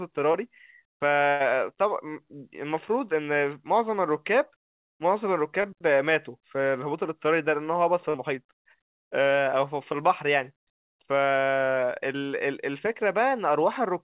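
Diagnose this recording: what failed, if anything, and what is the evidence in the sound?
Short concealed packet loss on the network leg of the call: brief smears or wobbles at 0.32 to 0.36 s, 5.62 to 5.66 s and 8.10 to 8.16 s, gaps of about 20, 20 and 40 ms. The receiver bridged each hole by extending the preceding sound, then crossfaded back into real audio.

A burst of packet loss, also in the network stage, opens at 1.30 s and runs to 1.42 s, about 100 ms of audio that never arrived. The decoder carried the last sound forward and let it decay, heard as a held buzz or fading hiss. The audio then resumes with that stretch simply gone, within the G.711 call audio's band that stops at 4 kHz.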